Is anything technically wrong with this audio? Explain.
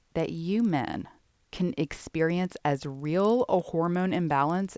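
Yes. Throughout the speech, the resampler restarted on every block, which fits a conversion from 44.1 kHz down to 16 kHz. Each 50 ms block was converted in isolation, so each block edge carries a small error. The result is a 20 Hz buzz riding on the speech and present only while there is signal.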